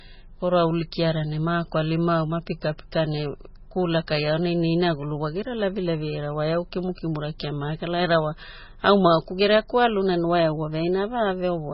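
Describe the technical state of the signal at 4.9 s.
At 4.9 s the speech sounds watery and swirly, with nothing above 5.6 kHz and heavy smearing, as it does throughout the clip. The likely cause is MP3 compression at a very low bitrate, around 16 kbps, which cuts the treble and switches weak frequency lines on and off between frames.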